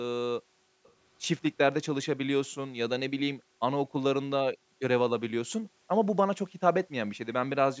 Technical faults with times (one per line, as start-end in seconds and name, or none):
0.42-0.84 background gated by the echo canceller
0.84-0.90 echo leak
3.39-3.61 background gated by the echo canceller
4.56-4.81 background gated by the echo canceller
5.69-5.88 background gated by the echo canceller